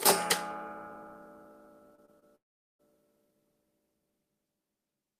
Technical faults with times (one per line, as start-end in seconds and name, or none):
1.95-2.23 short concealed packet loss
2.35-2.81 long network dropout